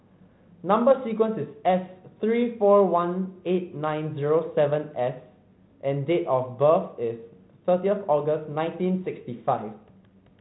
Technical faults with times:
none

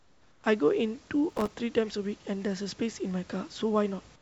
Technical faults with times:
0.00-0.44 comfort noise in place of the background
1.30-1.56 processor overload crackle

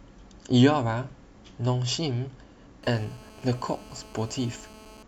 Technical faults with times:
2.83-5.03 GSM phone buzz

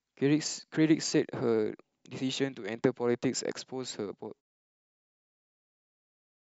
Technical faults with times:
none

